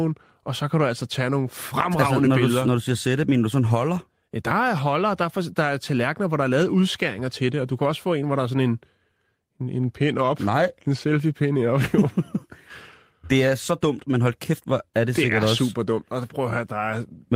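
A recording of speech with no audible technical faults anywhere in the signal.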